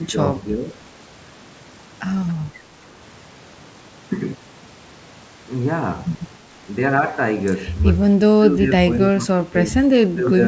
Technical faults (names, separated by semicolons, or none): speech suppressed in double talk